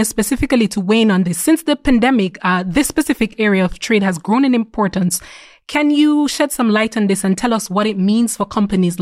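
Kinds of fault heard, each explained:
Nothing stood out on listening to this recording.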